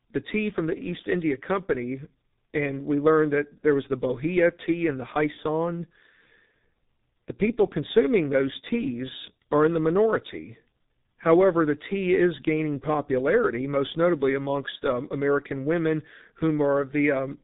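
G.723.1 codec damage runs through the whole recording, from start to finish. The speech has passed through a very low-rate telephony coder that models the voice in coarse 30 ms chunks, and the heavy artefacts point to a bitrate near 6 kbit/s. Nothing survives above 3.8 kHz, so the speech sounds muffled and boxy. The slowly updated voice model leaves a hoarse, buzzy roughness and smears consonants together.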